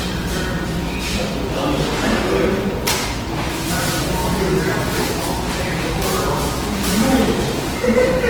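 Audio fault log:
Throughout: Opus compression, likely at a low bitrate around 16 kbps in music mode; bands are filled by folding or noise, so tones sound grainy, rough and noisy.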